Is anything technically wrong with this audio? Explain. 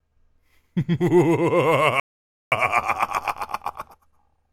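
Yes, there's a rebuffering stall. At 2.00 s the sound just drops to silence and stays there until 2.52 s, when it picks up exactly where it left off. That's the player running dry: it got ahead of what had been downloaded, had nothing left to play, and waited for more data. Nothing is skipped or lost, but about half a second of dead air gets wedged into the middle of the clip.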